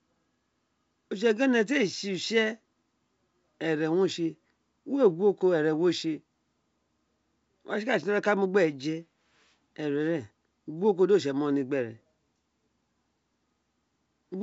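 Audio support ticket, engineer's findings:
No faults found in the speech; wideband G.722 telephone coding path in use, content extending to about 7.7 kHz, consistent with the 64 kbit/s mode.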